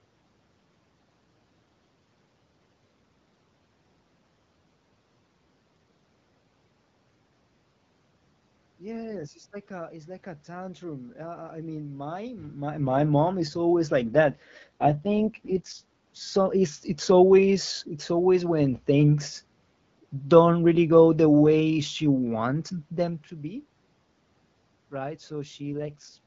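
The codec's bitrate drops twice in this speech recording, an AMR rate drop: from 14.04 to 15.91 s and again from 25.71 to 26.19 s, the network apparently pushes the AMR-WB encoder to a lower mode to spare bits for error protection. The voice turns rough and raspy, more synthetic, with the bandwidth unchanged and no gap. This fits a fall from 12.65 to 6.6 kbit/s, and clarity returns once the rate recovers.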